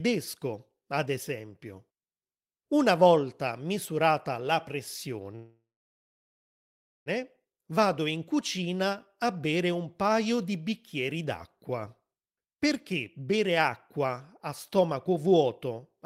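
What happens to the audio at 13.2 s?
Right around there, from 13.19 to 13.50 s, you get a jitter buffer speed-up. The receiver had banked too much audio, so it trimmed tiny pitch-period slices, around 40 ms in all. The speech runs at about 109% speed, same pitch, sounding briefly rushed.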